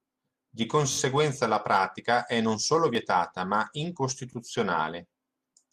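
At 4.33 to 4.35 s the speech has a repeated buffer: new audio missed its deadline, so the output replayed its last block once. A piece of about 21 ms sounds twice with a hard join, which fits a 1024-sample buffer, heard as a brief stutter with no apparent loss.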